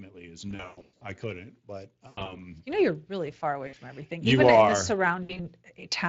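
Speex codec damage is plainly audible across the whole clip. The coloration points to a setting around 20 kbps. CELP coding gives the excitation a limited bit budget, which roughens the speech. Anything above 8 kHz is just shaped noise fill rather than real detail.

From 0.05 s to 5.56 s the automatic gain keeps rising, adding about 9 dB overall. The control judged the input too quiet and crept its gain up. Since it can't separate voice from background, both swell together over those five-plus seconds.

On top of that there are four stretches of VoIP packet loss concealed by the speech codec. The first, at 0.49 to 1.04 s, loses about 360 ms scattered over roughly half a second, with the longest gap 120 ms. Then come 2.07 to 2.41 s, with 140 ms lost and runs up to 100 ms, a single 60 ms gap at 3.67 to 3.75 s, and 5.23 to 5.41 s, with 100 ms lost and runs up to 60 ms. In each gap the decoder guesses from its last pitch and filter while the gain drops. 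That smears into a fading buzz or coloured noise, and the speech stays weakened briefly after packets resume.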